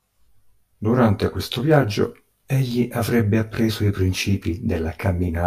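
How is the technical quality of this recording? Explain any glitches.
The recording has one fault, present throughout the speech: channel delay (comb filtering). One channel lags the other by around 20 ms, and when the two are summed to mono, components common to both cancel at evenly spaced frequencies, starting near 20 Hz and repeating roughly every 50 Hz. The voice sounds rough or slightly doubled. A spectrogram shows fixed horizontal dark bands, finely spaced, across the whole clip. The waveform looks smeared rather than cleanly transient.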